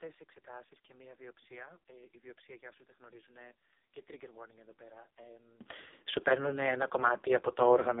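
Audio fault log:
Throughout: AMR narrowband mobile codec. Nothing gets through above about 3.8 kHz and the low end thins out below roughly 250 Hz. At 4.75 kbps, the vocal-tract model fed by a handful of pulses per subframe leaves the speech heavily buzzy and synthetic, which is classic AMR-NB damage at its lowest rate.
0.00–5.61 s: one channel inverted. For the first 5.6 seconds the speech drops by about 23 dB to a faint copy, then comes back up right before "σου παίρνουν ένα". That's likely one side flipped in polarity, so the centred voice cancels when the channels fold down to mono.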